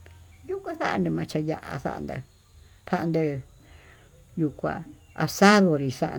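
No technical faults are audible.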